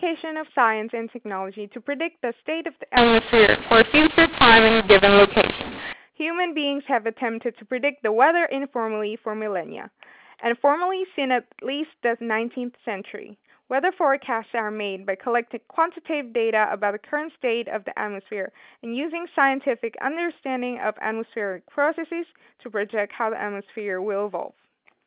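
From 2.97 s to 5.93 s, the speech turns harsh and gritty. This is a mu-law and A-law mix-up. The telephone audio was encoded with mu-law but decoded as A-law. The two logarithmic scales map each 8-bit code to different levels. Loud samples come back at the wrong size, and the quietest ones jump well above silence. Pauses fill with hiss. The distortion is rough. The narrow band, with nothing above 4 kHz, points to ordinary 8,000-sample telephone coding.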